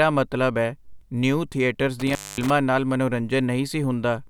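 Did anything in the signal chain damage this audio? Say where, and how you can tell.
Yes. An intermittent contact in the analogue wiring, a loose cable or plug, briefly opened between 2.00 and 2.50 s, with the line open for about 230 ms. The speech drops out abruptly, and crackle marks the edges where the connection breaks and remakes.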